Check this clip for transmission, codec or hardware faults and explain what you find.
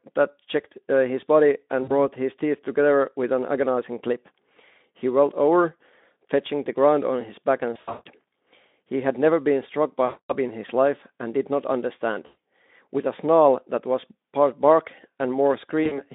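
Yes, there is one transmission fault, recurring five times in this speech clip, heard through a Speex-coded line limited to about 200 Hz to 3.6 kHz.

VoIP packet loss concealed by the speech codec, at 1.83–1.91, 7.74–8.08, 10.05–10.36, 12.25–12.38 and 15.83–16.04 s. The decoder fills the missing audio by extending its last pitch and spectral shape at decreasing gain, so the speech smears into a fading buzzy tone or coloured noise. The gaps range from 40 ms to 260 ms. At 7.74 s the losses are scattered, with the longest run 160 ms.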